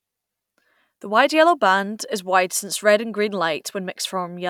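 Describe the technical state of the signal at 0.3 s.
At 0.3 s the speech signal is intact, with no audible fault at that moment.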